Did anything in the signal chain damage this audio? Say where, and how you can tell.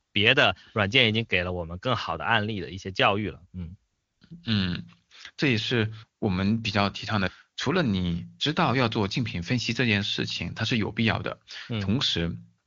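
Yes. At 0.01 to 0.13 s, 3.91 to 4.21 s and 12.65 s, the real background gives way to a steady, smooth hiss that switches in and out. This is AMR comfort noise: the phone judged the talker silent and stopped sending speech frames, so the receiver synthesised noise from a coarse level-and-spectrum description.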